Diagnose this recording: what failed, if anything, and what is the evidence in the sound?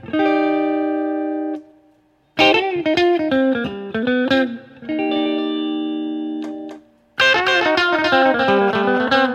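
From 5.1 s to the end, a quieter copy abruptly appears, trailing about 300 ms behind: a doubled audio track, likely from a slower capture path.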